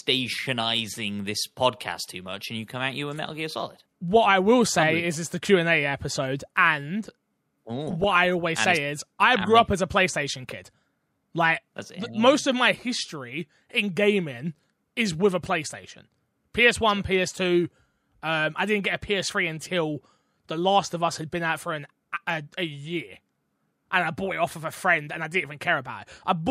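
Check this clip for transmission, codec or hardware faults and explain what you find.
Two bursts of DAB burbling, at 0.32 to 0.67 s and 7.87 to 8.42 s. Weak reception let bit errors of a few tenths of a percent slip past error correction into the MP2 data. Corrupted samples then leave short blips of noise in single sub-bands over the speech.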